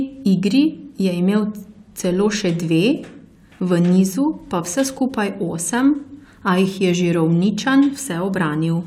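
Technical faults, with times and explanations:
No technical faults can be heard in the speech recording. There is nothing here that needs a time or an explanation.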